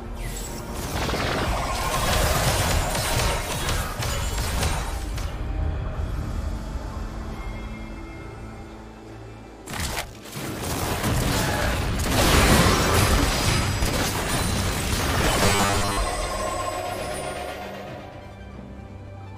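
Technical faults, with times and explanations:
15.43 to 15.97 s, robotic sound from repeated short buffers: the sound becomes a rigid, metallic buzz fixed at 100 Hz, likely from a 10 ms piece being looped while most of the real audio was skipped. Unlike dropouts, there are no gaps; the drone still roughly follows the sound's shape.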